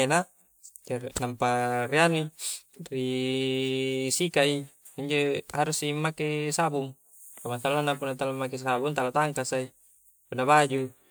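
Nothing stood out as a technical fault on listening to the speech.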